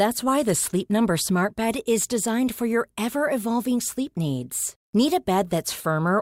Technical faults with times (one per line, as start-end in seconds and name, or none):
none